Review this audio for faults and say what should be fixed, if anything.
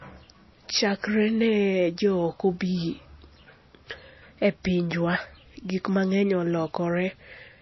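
Across the whole speech clip there is plainly audible damage from what is likely MP3 compression at a low bitrate, around 24 kbps. With so few bits, the encoder cuts everything above 5.8 kHz, leaving the speech dull and stripped of sibilant detail, and drops weak frequency lines that flicker in and out between frames, giving a watery texture. A spectrogram shows a hard flat ceiling at 5.8 kHz with patchy, speckled gaps below it. To prevent this, keep the original uncompressed file or re-encode at a much higher bitrate.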